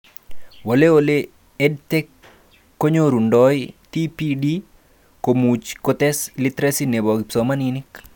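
No technical faults can be heard anywhere in the recording.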